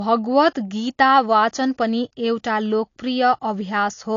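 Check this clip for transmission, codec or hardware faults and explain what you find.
One codec fault runs through the whole speech clip: low-bitrate audio saved at a high bitrate. Nothing exists above 7.2 kHz, a flat spectrogram ceiling that is likely from an earlier low-bitrate encode, leaving the sound dull despite the large file.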